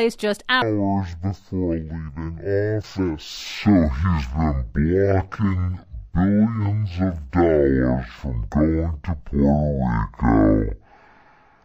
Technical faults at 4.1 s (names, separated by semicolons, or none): stereo read as mono